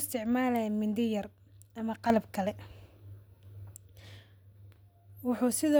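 From 2.1 to 3.77 s, a sudden gain jump lifts speech and noise by about 6 dB, likely an unramped gain change; waveform envelope steps abruptly up.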